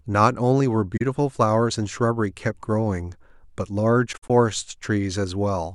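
AAC frame loss with muting in this speech clip, at 0.96 to 1.02 s and 4.12 to 4.30 s: the decoder zeroes the missing frames, leaving soft-edged dropouts, the second broken into gaps of up to about 70 ms.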